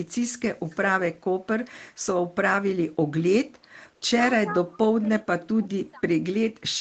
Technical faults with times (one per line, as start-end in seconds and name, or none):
0.68-0.77 echo leak
4.46-5.08 speech suppressed in double talk